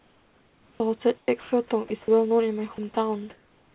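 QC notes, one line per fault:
0.0–0.8 s and 3.3 s to the end: comfort noise in place of the background. The room tone turns steady and featureless, about 5 dB quieter at first and about 1 dB at the end, likely from discontinuous transmission.
0.76–0.8 s: onset clipped by the voice detector. The first 40 ms are missing, so the sound starts abruptly. Unlike the later chopping, this is a single late switch-on, likely from the voice detector.
1.18–1.52 s, 1.88–2.08 s, 2.76–2.96 s: sound chopped by the voice detector. About 220, 80 and 40 ms of quiet sound in the 4 kHz-limited call audio are swapped for synthetic noise rather than silence, likely from repeated detector switching.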